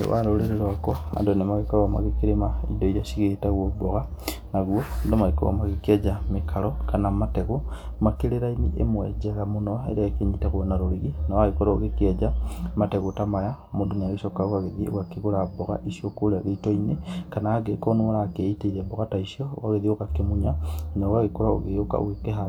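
No technical faults are audible.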